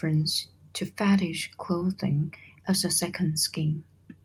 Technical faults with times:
1.79-1.83 short concealed packet loss

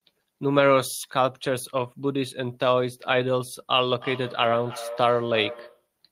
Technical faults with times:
3.90-5.89 feedback echo between two devices

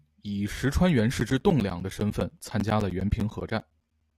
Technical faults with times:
1.20-4.11 periodic USB or driver dropouts

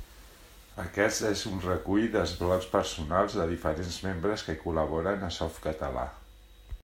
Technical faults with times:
none

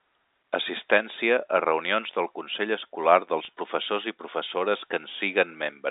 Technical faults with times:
3.45-3.48 packet loss with pitch repetition

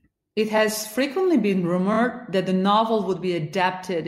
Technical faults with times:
0.56-0.59 repeated frames
1.92-1.97 repeated frames

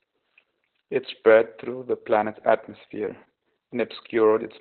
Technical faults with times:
0.00-4.61 Opus voice compression

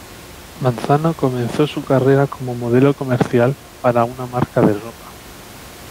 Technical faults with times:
none

